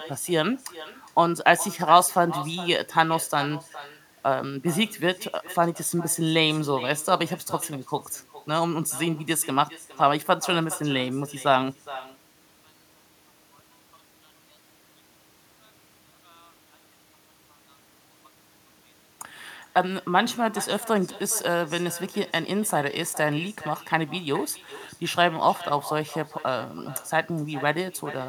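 From start to end, echo with no canceller is heard. The far loudspeaker feeds its microphone, returning each phrase about 16 dB quieter and thin, roughly 0.4 s later.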